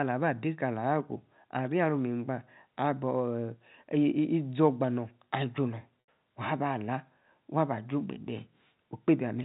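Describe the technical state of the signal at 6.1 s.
At 6.06 to 6.08 s there is packet loss with pitch repetition. About 80 ms of speech, consistent with four lost packets, is bridged by repeating the last pitch period, so the sound briefly holds and fades into silence, and the speech returns with a short cross-fade.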